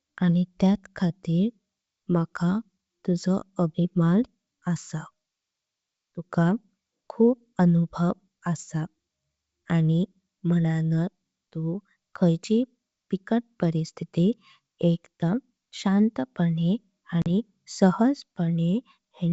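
At 17.22 to 17.26 s, just after "परिस्थीती एकदाम शांतपणे", packet loss on an ADPCM call leaves a 40 ms hard-edged hole: a flat waveform and blank spectrogram column, then an unsteady restart as the decoder's predictor resynchronises.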